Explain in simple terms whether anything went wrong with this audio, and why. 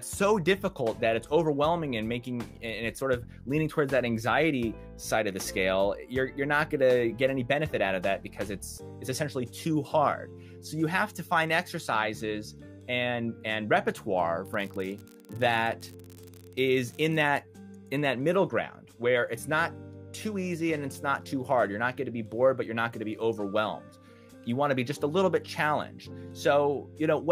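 Yes, something went wrong: from about 14.44 to 17.41 seconds there is an unreliable data bit. One of the lines carrying the digital audio was flaky, so that bit came out wrong at random moments, each error adding an identical small jolt. The result is a steady crackle or fizz that continues even when the sound goes quiet.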